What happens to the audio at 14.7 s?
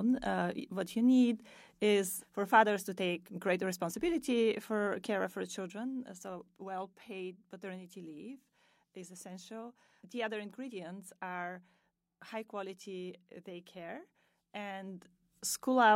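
Zipper noise appears from 14.65 to 15.41 s, right after "high quality daycare". The level shifts by about 10 dB in unsmoothed steps, roughly 300 a second. Each step clicks, so a fine buzzy ticking rides on the speech while the level moves.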